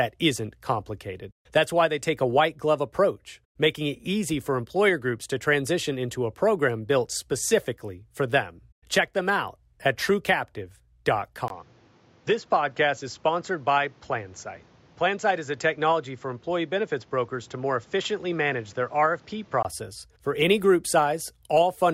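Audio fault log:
11.48 to 19.65 s, input switched to a poorer device: a 20 ms gap, then the speech turns dull from "for any group" on, with nothing above 7.6 kHz and a new noise floor around 30 dB down, at the same loudness, until it clears. Likely a mid-recording mic swap.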